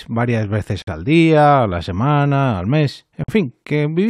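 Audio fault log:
0.82–0.87 s and 3.24–3.28 s, gap at a join of encoded pieces: speech halts for about 52 ms, then 49 ms, with smeared edges, and resumes exactly where it stopped. Untrimmed encoder delay and last-frame padding sit at each join. Unlike a dropout, no sound is lost.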